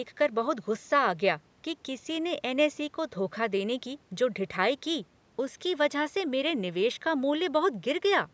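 No technical faults can be heard: the speech carries the ordinary marks of a call's microphone processing, with the lowest bass trimmed by its high-pass filter and nothing above 8 kHz, both of which are expected for that path.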